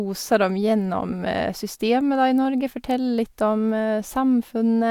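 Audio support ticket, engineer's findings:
No faults found in this speech.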